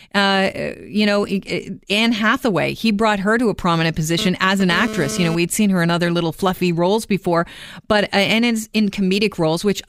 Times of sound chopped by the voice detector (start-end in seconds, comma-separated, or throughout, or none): none